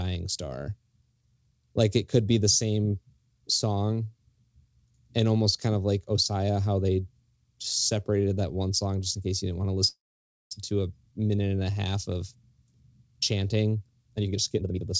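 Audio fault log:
9.88–10.53 s, call audio freeze: sound stretches into a fading buzz, then about 0.54 s of silence. Likely delayed packets emptied the jitter buffer; nothing lost, just a gap.
14.17–14.93 s, jitter buffer speed-up: speech rushes at about 167% speed, same pitch. Short pitch-period pieces were cut, roughly half a second, to shrink built-up delay.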